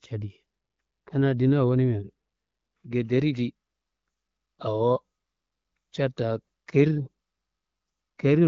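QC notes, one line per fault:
No faults heard.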